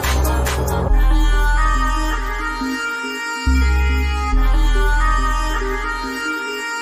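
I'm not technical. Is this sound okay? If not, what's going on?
Yes, this one's fine: nothing in it jumps out as broken or glitchy, so there's nothing here you need to worry about.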